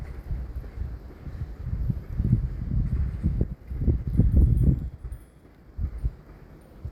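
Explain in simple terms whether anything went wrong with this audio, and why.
Skip ahead at 3.43 s: roughly a second of sound never arrived or was thrown away, so playback jumps forward with no gap.

Jitter buffer speed-up from 3.53 to 4.39 s and 4.88 to 5.71 s: tiny slices were trimmed repeatedly, running the sound 6% then 11% fast at unchanged pitch.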